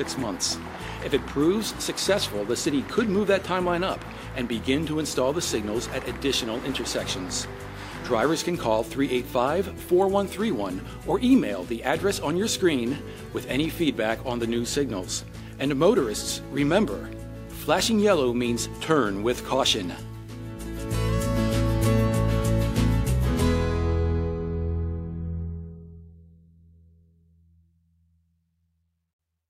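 There are no technical faults to describe in this audio.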